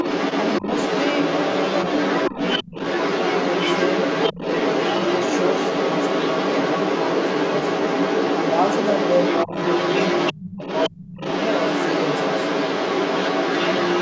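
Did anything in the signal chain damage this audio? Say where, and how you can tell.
Yes, the damage happened at the call-processing stage. A second, competing voice sits alongside the talker from the start to 10.33 s and again from 10.49 s to the end, running about 5 dB louder than the talker. This is the other side's voice leaking through. The far end was played on a loudspeaker, picked up by the microphone, and only partly removed, which is likely a sign of an echo canceller that did not remove all of it.

Speech suppressed in double talk shows up as abrupt dips in the talker's level while both voices overlap. There are brief holes of roughly 70 ms at 2.64, 4.32 and 9.46 s, dropping about 20, 20 and 15 dB. Longer gaps of about 0.3 s follow at 10.33–10.60 s and 10.90–11.20 s, cutting about 25 and 30 dB. The likely cause is the canceller's suppressor treating the near talker as echo and attenuating everything.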